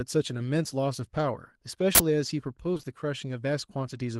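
Speech, hit by two system faults. First, an uninitialised buffer: at 1.95 s the playback path sent out a block before any audio had been written into it, so whatever stale data sat in that memory was played as if it were samples. The result is a short, loud burst of digital noise lasting until 2.00 s, about 46 ms, which fits a 2048-sample buffer. Then comes short concealed packet loss, three times in a row, starting at 2.73, 2.77 and 2.81 s. Each time roughly 20 ms of the stream failed to reach the decoder in time, and the receiver patched the gap by extending the preceding sound before blending back into the real signal. Across 2.73 to 2.85 s this leaves a smeared, wobbling stretch where the original detail has been replaced by synthesised continuation.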